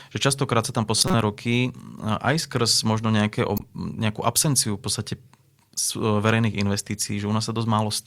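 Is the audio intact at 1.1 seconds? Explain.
No. Right after "sa tam", from 0.98 to 1.14 s, a loud chirp, squeak or burst of noise peaking around -5 dBFS breaks through. This is a corrupt frame decoded: bit errors in a handful of compressed frames were played anyway, misplacing energy across frequencies.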